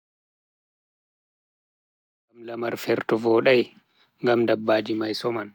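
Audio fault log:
No fault appears in this speech.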